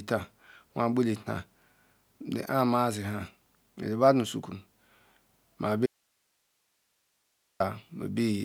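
At 5.86 s the speech cuts out abruptly, and it returns just as suddenly at 7.60 s. This is an audio dropout to a faint residue, lasting about 1.74 s. The gap is not silent. It holds only hiss, sitting far below the speech, around 45 dB down. The likely cause is a brief loss of the wanted signal while the path after the break stayed live. The sharp edges set it apart from a natural pause or fade.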